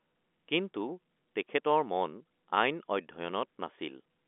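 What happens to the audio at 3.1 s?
Nothing goes wrong at 3.1 s: the speech carries on intact through that moment, with only the narrow telephone band of the G.711 line, which passes nothing above about 3.7 kHz.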